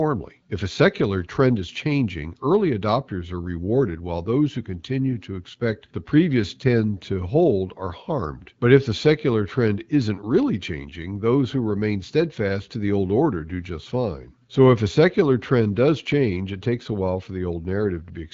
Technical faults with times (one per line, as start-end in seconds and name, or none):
none